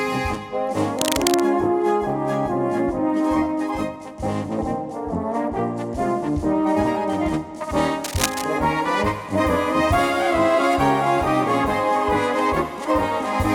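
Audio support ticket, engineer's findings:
Cable scratch noise at 0.99–1.42 s and 8.04–8.44 s: rough scratchy bursts, only around 5 dB under the sound. Likely a worn lead or connector getting moved, contact resistance jumping around.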